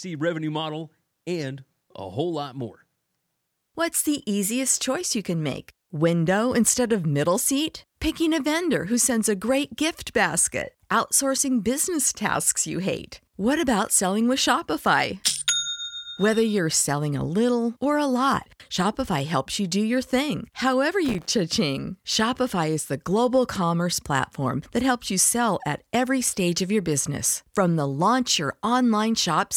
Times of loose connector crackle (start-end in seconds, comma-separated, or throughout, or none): 6.66-6.69, 21.05-21.26